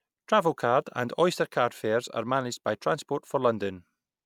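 No technical faults can be heard anywhere in the speech recording, and the signal stays steady throughout.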